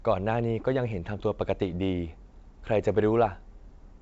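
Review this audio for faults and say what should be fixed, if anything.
No faults; nothing needs fixing.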